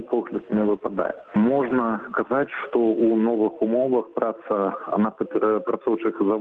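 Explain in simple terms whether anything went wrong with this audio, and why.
A call bitrate drop happened between 0.36 and 3.55 s. The call's connection estimate fell, so the encoder had to squeeze the audio into far fewer bits, bottoming out for about 1.6 s. The sound turns coarser and rougher until the bitrate recovers.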